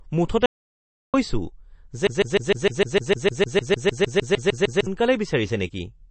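Throughout, the speech shows MP3 compression, likely from an encoder starved of bits, which fits a rate around 32 kbps: nothing survives above 8.3 kHz, and weak frequency lines flicker between frames, giving a plainly audible watery, swirling texture, smeared onsets and chirpy sibilants.

From 0.46 to 1.14 s comes an audio dropout to silence, likely a lost input while recording continued writing silence. About 680 ms of speech vanishes, and the gap is silent with no room tone, cutting off and resuming abruptly.

From 2.07 to 4.87 s a broken-record loop takes over, likely a stalled player or stream resending its last buffered fragment. A 152 ms piece repeats back to back 18 times, a stuttering mechanical rattle, while the speech that belonged there is lost.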